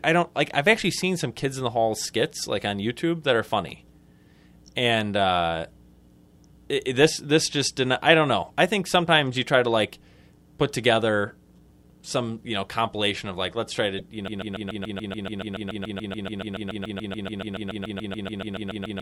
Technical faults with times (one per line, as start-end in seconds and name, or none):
13.97-14.01 damaged data in a compressed stream
14.28-19.01 broken-record loop